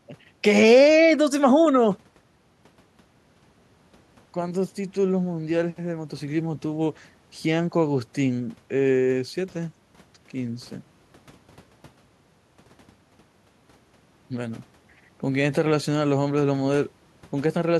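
The speech recording carries no audible technical fault anywhere in the signal.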